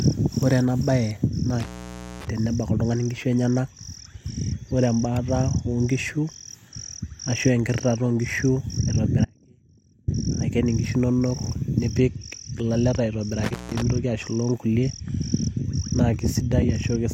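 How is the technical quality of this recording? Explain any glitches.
The recording has three glitches: two brief contact breaks and one longer signal loss.

Intermittent contact occurs at 1.60–2.28 s, just before "tenebak oltung'ani nkishu", and again at 13.44–13.82 s, right after "nipik ilaleta". A loose plug or cable briefly opened the line, for about 0.53 s and then 0.17 s. Each gap is crackly at its edges and leaves only faint hiss.

An audio dropout to a faint residue runs from 9.25 to 10.08 s, ending just before "aiken inkishu". The sound cuts abruptly for about 0.83 s, leaving a faint trace roughly 35 dB below normal level, likely from the source signal being lost while the downstream path stayed live.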